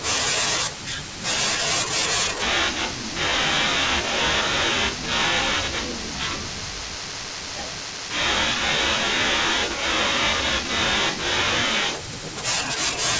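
From 2.42 to 11.95 s, a wrong sample rate plays the speech at half speed, consistent with 32 kHz audio played at 16 kHz, dropping it a full octave, low and dragging.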